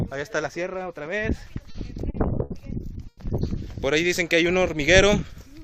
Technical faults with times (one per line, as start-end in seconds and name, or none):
1.37-2.52 repeated stalls (stutter)
3.08-3.19 short stall from a late packet